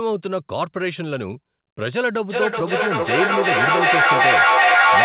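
From 2.29 s to the end, the speech returns roughly every 0.4 s, thin and ringing, with repeats piling up to about 8 dB above the original. This is feedback echo between two devices: one replays the other's microphone, which recaptures it beyond either echo canceller's reach.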